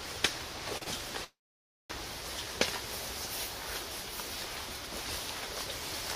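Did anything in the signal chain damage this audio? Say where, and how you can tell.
Yes. Two short stalls from a late packet, at 0.77 and 0.83 s, show a jitter buffer running dry. The last sound is held for 40 ms, then 28 ms, appearing as smeared flat bands on a spectrogram.

A call audio freeze runs from 1.24 to 1.92 s, likely caused by packets held up in the network. A fading buzz or hiss gives way to about 550 ms of flat waveform, then the sound resumes where it stopped.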